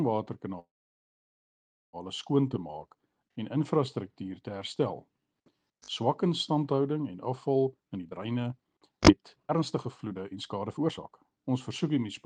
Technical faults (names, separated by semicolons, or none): call audio freeze; jitter buffer speed-up